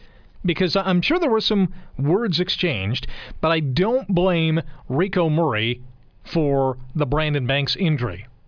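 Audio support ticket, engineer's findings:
No technical faults found in the speech signal on review; nothing to attribute to any component, no action required.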